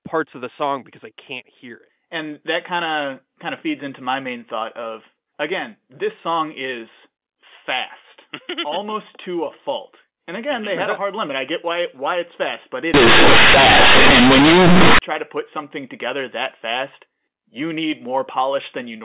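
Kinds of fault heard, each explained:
Companded audio read as linear: from 12.94 to 14.99 s the mu-law telephone bytes are played as raw 8-bit samples with no expansion. Each sign change swings the output across about half its range, so quiet passages become as loud as strong ones, giving harsh, buzzy distortion with heavy noise in the pauses. The waveform jumps to a jagged, large block, and the spectrogram fills with broadband energy up to 4 kHz, even in the gaps.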